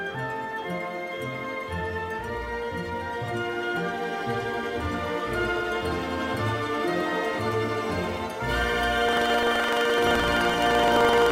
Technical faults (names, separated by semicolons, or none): buffer tearing